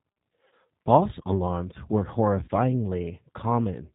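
Throughout the clip, the speech shows plainly audible G.729 codec damage. Nothing above 4 kHz survives, and the voice has the rough, slightly synthetic texture of a low-rate coder rebuilding each 10 ms frame from a vocal tract filter, pitch predictor and sparse pulses. This is consistent with roughly 8 kbit/s.

From 0.48 to 0.54 s, and again from 2.44 to 2.49 s just after "alarms were", VoIP packet loss concealed by the speech codec replaces 40 ms of audio each time, which fits two lost 20 ms packets. The decoder extends the last pitch and filter into a fading buzzy tone or coloured noise, and the sound stays weakened briefly afterward.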